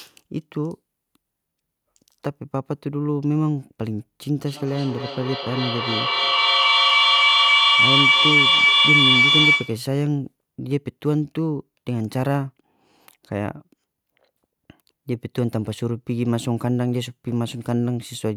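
At 4.46 s a feedback howl starts to build over the speech. The sound from a loudspeaker is reaching a microphone on the same call and going round again. Each pass comes back louder instead of fading. The loop narrows to a tone near 2 kHz, with a round-trip delay of roughly a third of a second. At its peak the howl sits about 6 dB above the speech. It stops at 9.93 s.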